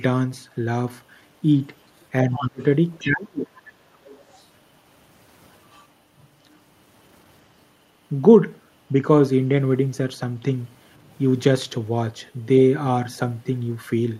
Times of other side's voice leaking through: 2.34-2.39, 2.94-3.07, 4.05-4.44, 12.58-12.63

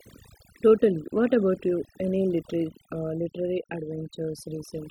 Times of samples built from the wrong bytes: none

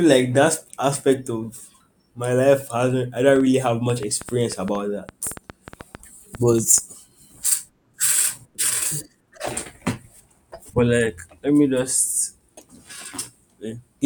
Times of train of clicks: 3.36-6.79

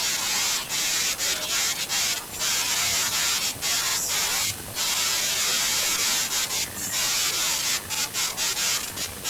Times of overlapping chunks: 7.95-8.00

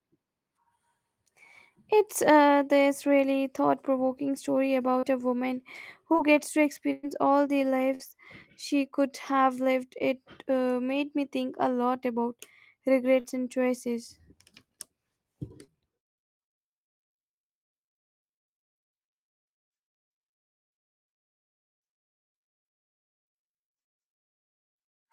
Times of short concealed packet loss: 4.99-5.04, 6.12-6.27, 13.20-13.26, 15.64-15.70

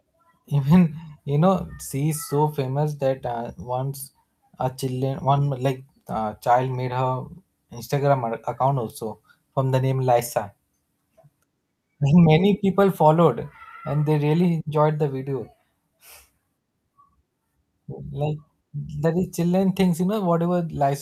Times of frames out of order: none

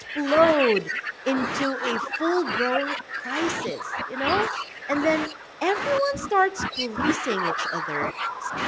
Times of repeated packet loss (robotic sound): none

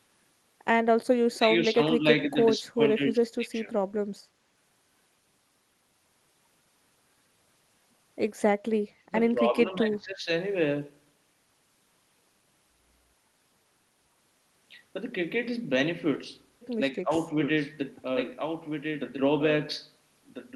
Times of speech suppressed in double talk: 1.25-3.72, 8.98-10.27, 16.95-17.12

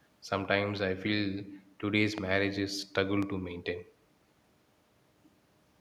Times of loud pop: 2.18-2.20, 3.22-3.25

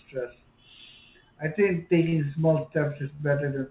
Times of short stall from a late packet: 2.09-2.27, 3.15-3.23

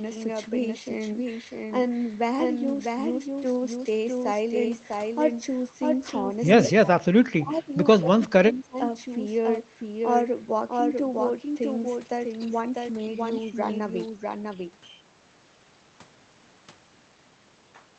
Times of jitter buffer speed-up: none

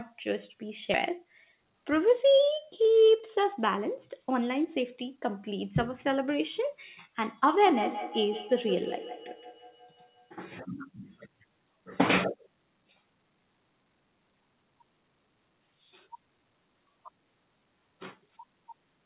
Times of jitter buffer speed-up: 1.10-4.84

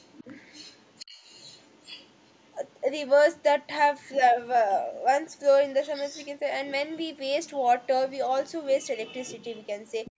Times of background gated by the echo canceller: 10.11-10.20

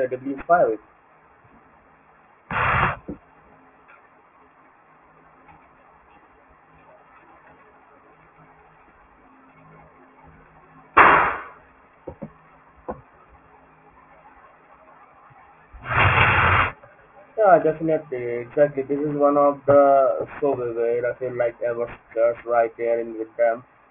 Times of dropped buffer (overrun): none

